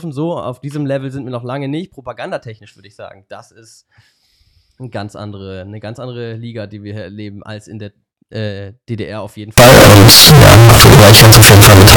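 Float read as integer from 9.58 s to 11.97 s, right after "auf jeden": the speech turns very loud, harsh and nearly square at an almost fixed, high level, with background noise as loud as the voice, though pitch stays traceable. This is likely 32-bit float samples read as 32-bit integers.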